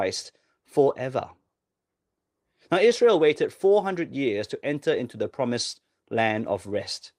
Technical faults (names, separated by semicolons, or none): none